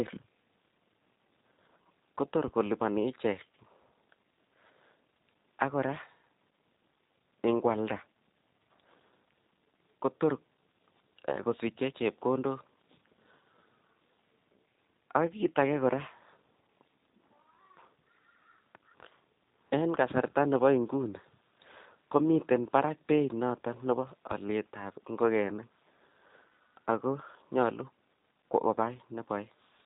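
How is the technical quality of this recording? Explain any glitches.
The recording carries plainly audible G.729 codec damage for its whole length. The speech has passed through this low-bitrate VoIP codec, whose character fits the 8 kbit/s G.729A variant. Instead of storing the waveform, it rebuilds each 10 ms frame from a vocal tract filter, a pitch predictor and a few pulses. That model gives the speech a slightly rough, synthetic texture. Nothing is present above about 3.8 kHz, so it sounds band-limited and dull, like a telephone call.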